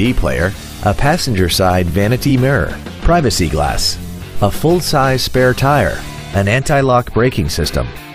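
Repeated frames occur at 0.76 to 0.78 s, 2.29 to 2.31 s and 4.08 to 4.12 s, where a short block of compressed audio was delivered twice and the decoder played it again. The first two repeats last 23.2 ms each, consistent with a single frame. The third lasts 46.4 ms, which points to two frames. Each is heard as a brief stutter as the same slice of sound recurs, and together they lengthen the audio by about 93 ms.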